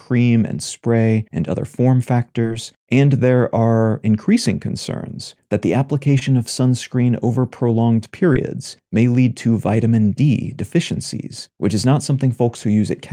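Speech, with three instances of short concealed packet loss: at 2.41–2.45 s after "spray and other form", at 6.19–6.23 s after "increasing concerns that the", and at 8.33–8.37 s after "of sunscreen over prolonged". Each time about 20 ms of audio arrived too late to decode, and the receiver bridged the hole by extending the preceding sound before crossfading back, leaving a brief smear or wobble. A plain dropout would leave silence or a hard click instead.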